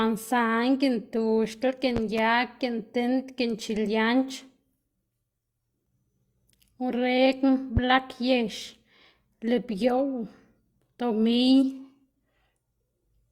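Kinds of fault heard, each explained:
Loud pop: at 1.97–2.21 s two sharp pops arrive in quick succession, and at 7.77–7.80 s a single pop follows. Each stands roughly 10 dB above the speech, which continues underneath without interruption. A sudden voltage step or pulse, likely from a plug, switch, static discharge or driver glitch, has been added to the signal, and the downstream circuitry shapes that impulse into the short, hard thump heard here.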